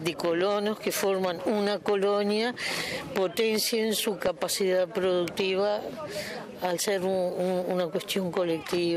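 DAB burbling appears from 4.15 to 4.39 s and again from 7.23 to 7.39 s. A low rate of bit errors slips past error correction and corrupts MP2 samples and scale factors. Single sub-bands then get short blips of noise or jump in level for up to a frame. On a spectrogram this shows as isolated rectangular bursts confined to narrow bands.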